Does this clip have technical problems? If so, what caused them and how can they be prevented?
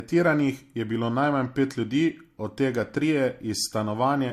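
Yes. Throughout the speech, nothing is heard above 16.2 kHz, and two kinds of compression artefacts sit on top of each other. The likely cause is transcoding between lossy codecs. The sound points to a 64 kbit/s Vorbis encode that was re-encoded as 64 kbit/s MP3, with the second encoder spending its bits on the first one's damage. To prevent it, encode only once from the original source and keep any intermediate copies lossless.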